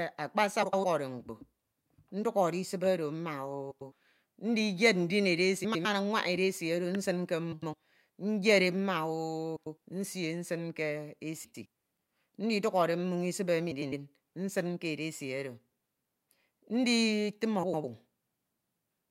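Eight short garbled spots turn up at 0.62, 3.71, 5.64 (right after "ndiyed ndin"), 7.52, 9.56, 11.44 (just after "nsin ke"), 13.71 (just before "nsin ke") and 17.63 s. Each is a case of frames out of order: two neighbouring chunks, each about 104.5 ms and consistent with runs of four frames, got swapped, so roughly 0.22 s plays back-to-front by halves. You hear a fluttery jumble, but no time goes missing.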